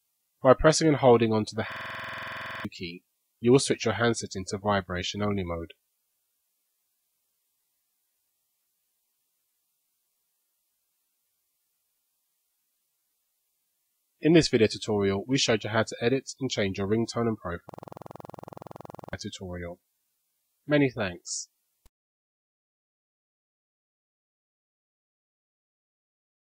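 Twice the audio locks into a system hang loop: from 1.72 to 2.65 s, and again from 17.69 to 19.13 s. A 46.4 ms fragment repeats exactly at 21.5 Hz, about 20 then 31 times, which fits a 2048-sample buffer being replayed while the system stalled. It gives a rapid stutter and loses about one and one and a half seconds of audio. The repeats are identical, which sets it apart from packet-loss concealment, whose repeats fade or vary.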